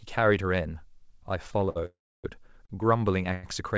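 At 1.52 to 1.55 s and again at 1.69 to 1.77 s the speech briefly sticks: a short stall from a late packet. The receiver's jitter buffer ran dry, so the last sound was held for about 15 ms and then 61 ms until the packet turned up, and the speech carried on from the same point. It sounds like a sound held slightly too long, with a faint buzz or dip, and nothing is skipped.

From 1.86 to 2.26 s comes a call audio freeze, likely from packets held up in transit. The held sound turns into a buzz or hiss that fades, then about 300 ms of silence, about 382 ms of inserted delay in all, before the speech resumes where it stopped. Its length and the silence set it apart from the brief stalls.

Further short stalls from late packets follow at 2.66 to 2.71 s, filled for about 38 ms, and 3.33 to 3.45 s, filled for about 98 ms. All of this rides on a G.722 call path whose audio stops at 8 kHz.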